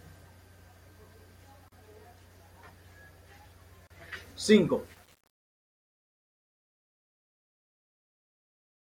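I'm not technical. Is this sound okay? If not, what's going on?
No. The speech was encoded in separate pieces and joined without trimming the padding, leaving a gap at each join: brief silences of about 37 ms at 1.68 s and about 34 ms at 3.87 s.

The fade-out from about 5 s to the end keeps too few levels of detail, which fits about 8 bits. This truncation distortion on the fade makes the sound gritty from 4.86 s as it gets quiet.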